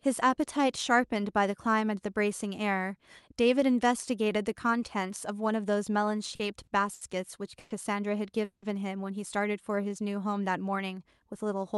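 Around 6.35 to 6.41 s, 6.63 to 6.69 s and 6.93 to 7.03 s, the speech briefly hangs on a held sound with a faint buzz or dip: a short stall from a late packet each time. The jitter buffer ran dry, so the receiver stretched the last sound for 40, 40 and then 80 ms until the packet turned up. The speech then resumes where it paused, with nothing lost.

Longer holds follow at 7.59 to 7.72 s and 8.44 to 8.64 s. Each is a call audio freeze, where the last sound turns into a decaying buzz or hiss. The first is filled for 110 ms. The second runs 180 ms and fades into about 110 ms of silence before the speech picks up again. These are likely caused by packets delayed in transit emptying the buffer, which inserts a gap without dropping any speech.

From 9.71 to 10.03 s the speech drags at the same pitch, running at about 90% speed with drawn-out sounds. This is a jitter buffer slow-down: the receiver repeated single pitch periods to rebuild its reserve, adding roughly 39 ms. 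Throughout, the audio carries the coding character of an Opus call path, with content above 12 kHz cut away.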